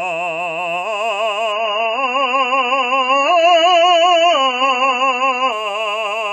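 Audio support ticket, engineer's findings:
1.52–5.52 s: sudden treble loss, nothing above 7 kHz, heavier codec artefacts, no gap. Adaptive stream at a lower bitrate, player dropped to a low rendition on slowed connection.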